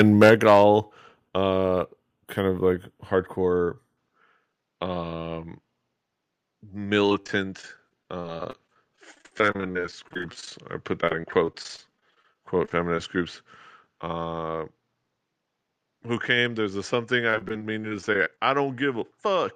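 Microphone overload runs from 0.00 to 0.61 s. The speech peaks drive about 5 dB past the converter's limit, so their tops are shaved flat on a few percent of the samples. That flattening adds a hard, crackling grit to the loudest syllables, and the likely cause is the microphone's input volume being set too high for the converter.

Microphone volume stepped down appears twice, at 0.29 s and at 1.29 s. The level falls abruptly by about 4 dB, then by about 6 dB, and voice and background sink together in a single step with no fade. This pattern likely comes from the call software detecting the overloaded input and cutting the device's gain in one step.

Input switched to a poorer device occurs at 3.97 s and lasts to the end. The tone turns duller and boxier from that point, because the new device passes a narrower band. A new noise floor around 50 dB below the speech comes in. There is no silence at the changeover and no noticeable jump in level. 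The likely cause is the system changing over to a different microphone or a headset's call profile partway through the recording.

Repeated packet loss (robotic sound) affects three stretches: 7.06 to 10.52 s, 11.02 to 12.98 s, and 17.30 to 18.38 s. Within each stretch, between 15 and 42 short holes follow one after another, the longest of all lasting 50 ms in the first stretch. Each hole is patched by extending the preceding sound, so between 15 and 20 percent of each stretch is synthetic fill. The result is choppy speech with fragments missing.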